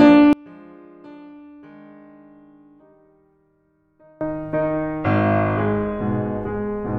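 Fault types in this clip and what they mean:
One channel inverted: from 0.33 to 4.21 s the music collapses to a faint remnant about 29 dB down, with the centred parts almost gone and only a trace of what differs between left and right surviving. The likely cause is reversed polarity on one stereo channel, so the material common to both sides cancels when they are combined into mono, leaving just their difference.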